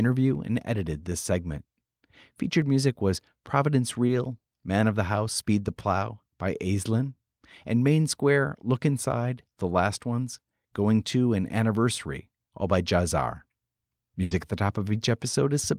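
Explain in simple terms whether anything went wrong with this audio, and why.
For the first two and a half seconds, from about 0.12 s to 2.62 s, the speech carries a regular ticking, roughly seven small clicks spaced half a second apart. These are periodic USB or driver dropouts. Something on the computer briefly interrupted the audio connection at a steady rhythm, and each time a sliver of sound, around half a millisecond, was skipped. The tiny jump in the sound wave is what makes each tick.

At about 4.07 to 4.11 s there is a brief smear, a short wobble in the speech lasting about 20 ms. This is short concealed packet loss. A small piece of the call arrived too late to be played, so the receiving end filled the 20 ms hole by stretching the sound that came just before it, then blended back into the real audio.

Near the end, from about 14.23 to 14.33 s, the speech turns into a short held buzz or hiss that fades before normal sound returns. 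This is a burst of packet loss. About 80 ms of the call was lost in a row. The receiver kept extending the last sound and lowered its volume as the gap went on. When the audio resumed, the speech picked up further along, and that stretch was missing.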